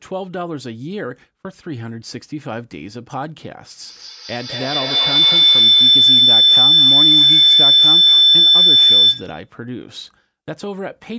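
Speech, with feedback howl from 3.86 s to 9.55 s: two devices on the call recirculate sound until a tone around 4 kHz swells to about 14 dB above the speech, with the loop repeating roughly every 200 ms. On a spectrogram it is a brightening horizontal line near 4 kHz, and the waveform's envelope swells.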